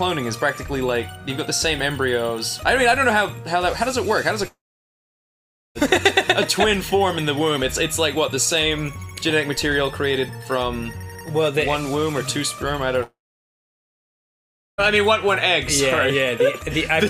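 Long network dropouts at 4.47 to 5.78 s and 13.03 to 14.81 s: the sound trails into a brief fading buzz, then near silence for about 1.2 s and 1.6 s, and resumes with a stretch skipped, likely because packets stopped arriving and the receiver filled the gap.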